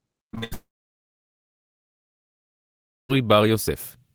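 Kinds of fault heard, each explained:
Repeated packet loss (robotic sound): From 0.31 to 0.53 s, four short gaps, the longest 72 ms, are patched by extending the last sound, leaving choppy, robotic speech.
Long network dropout: From 0.53 to 3.11 s the speech vanishes, the concealment fades to near silence for about 2.5 s, likely from a stalled network stream.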